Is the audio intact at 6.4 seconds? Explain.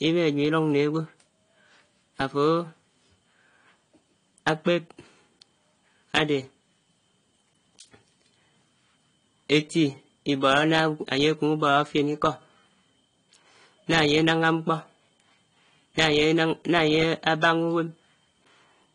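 No. At 6.4 seconds, as everywhere in this speech clip, the sound is dull and swirly, with watery, warbling sibilants and smeared consonants, and nothing above about 10.1 kHz. This is likely transcoding between lossy codecs: an MP3 stage, then AAC-LC at a low rate that fits about 32 kbit/s, re-encoding the earlier artefacts and adding its own. A spectrogram shows a hard ceiling at 10.1 kHz and patchy, flickering upper bands.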